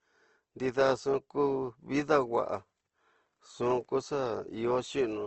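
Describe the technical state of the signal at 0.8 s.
At 0.8 s the speech carries Opus compression damage that runs through the whole clip. There is nothing above 8.1 kHz, and band energies are coarsely filled, so the sound is grainy and rough. This likely points to wideband CELT-mode Opus at a low rate, around 16 kbps.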